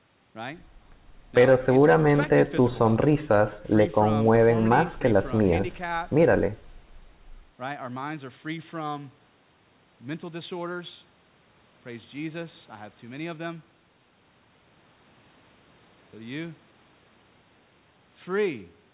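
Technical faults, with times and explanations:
No faults to report here, just speech carried over an ordinary call path, which is why nothing reaches above 4 kHz.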